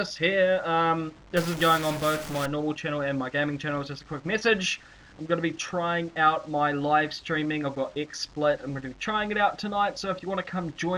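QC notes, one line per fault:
1.37–2.46 s, stuck bit: one data bit was likely held fixed by a faulty line or converter, so about half the samples jump by that bit's weight, around -30 dBFS, tracking the waveform. This gives harsh, buzzy distortion and fills quiet moments with noise.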